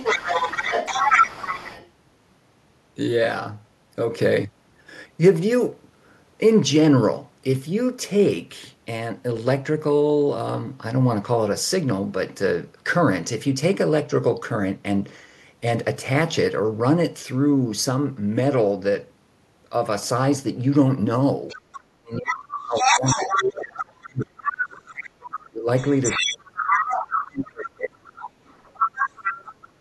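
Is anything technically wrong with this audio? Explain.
Yes. Other side's voice leaking through occurs at 0.00–1.88 s, 21.48–24.69 s, 25.31–27.27 s and 28.15–29.68 s. A second voice arrives roughly as loud as the talker at first and a little quieter later, likely because the echo canceller left loudspeaker pickup in the microphone signal.

Speech is suppressed in double talk from 21.53 to 28.13 s. The talker dips by as much as about 30 dB across roughly five seconds, likely because the canceller attenuated both voices while they overlapped.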